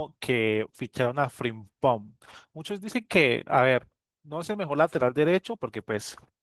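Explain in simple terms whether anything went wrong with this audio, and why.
Yes, something went wrong. The whole clip, from start to finish, carries Opus voice compression damage that is plainly audible. To save space, the encoder describes the speech roughly instead of storing it faithfully, so it comes out hoarse and a little robotic. Unlike a merely dull microphone, the high frequencies haven't simply been cut off. Unlike dropouts, the damage never comes and goes. It stays constant throughout.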